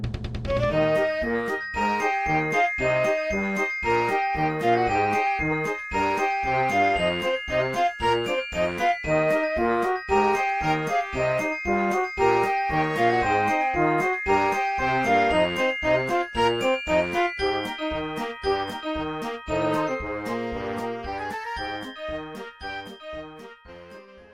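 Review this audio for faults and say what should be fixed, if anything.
Nothing to fix: no audible faults found in this audio.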